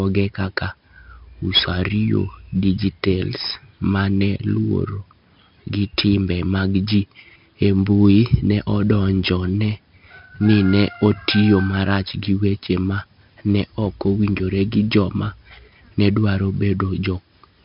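A speech recording, coated from start to finish in a gritty hiss that swells whenever the speech gets loud, with a rough, crunchy edge on sharp onsets and a dull top, since nothing reaches above 5.3 kHz. This is heavy 4-bit ADPCM compression: each sample is coded as a coarse step from a prediction, so the error rides the signal level and the step size lags on fast attacks. The narrow band points to a low sample rate near 11 kHz, which fits a bitrate around 44 kbps.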